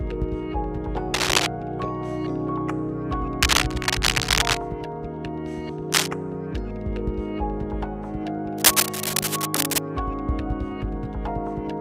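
Four bursts of cable scratch noise sit over the sound, at 1.14 to 1.47 s, 3.40 to 4.59 s, 5.92 to 6.08 s and 8.58 to 9.78 s, each a dense, ragged rustle somewhat louder than the sound itself. The likely cause is a worn cable or connector being moved, its contact resistance fluctuating. Unlike crackle's isolated ticks, these are continuous scratchy clusters that start and stop with the movement.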